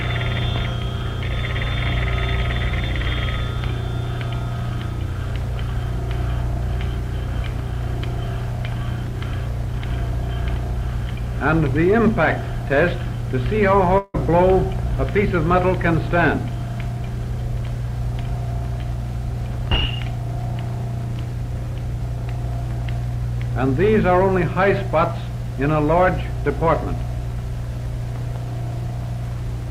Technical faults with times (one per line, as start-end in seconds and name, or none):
13.98-14.16 long network dropout